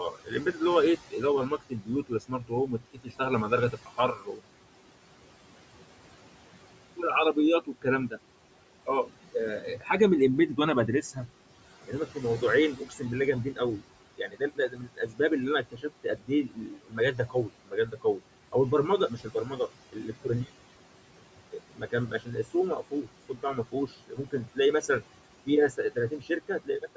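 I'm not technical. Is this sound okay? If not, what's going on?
No. The speech has noise suppressor artifacts from start to finish. A filter trying to remove the room's background noise lowers it between words and lets it back under them. A plain noisy room would give a steady background noise rather than this pumping.

There is also speech cut by the noise suppressor. The filter mistook quiet parts of the speech for background and turned them down, so soft sounds and word endings come out swallowed or faint. This happens from 0.11 to 4.4 seconds, 6.97 to 8.13, 8.86 to 9.9, 11.87 to 18.55, 19.08 to 20.48, and 21.52 to the end. These are short dips in the speech, not full gaps of silence as in a dropped connection.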